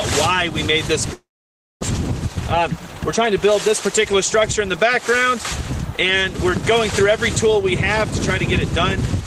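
From 1.13 to 1.85 s there is what sounds like a long network dropout, with the stream most likely cut off in transit so that nothing reached the receiver. The receiver stretched the last sound it had into a fading buzz or hiss, then left about 570 ms of near silence. When the audio returns, about 400 ms of it has been skipped, so the sound resumes further along and the output now runs roughly a third of a second behind.

From 2.28 to 4.06 s a jitter buffer speed-up follows. Audio that had piled up in the receive buffer was more than it aims to hold, so the receiver trimmed it back by repeatedly cutting out tiny pieces only a pitch period or so long. Playback runs at about 114% of normal speed with the pitch unchanged, which makes the sound seem hurried. Around a third of a second is shaved off this way.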